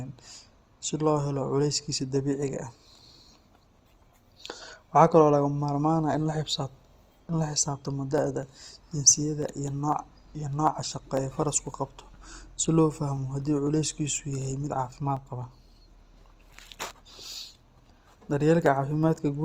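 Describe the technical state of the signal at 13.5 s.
At 13.5 s the speech has a grainy, rough, noisy texture across the full band, likely from Opus compression in its music (CELT) mode at a low bitrate near 24 kbps. It lies inside periodic USB or driver dropouts running from 8.18 to 19.16 s, where about half a millisecond of audio is skipped every 0.25 s, producing evenly spaced ticks wherever speech is present.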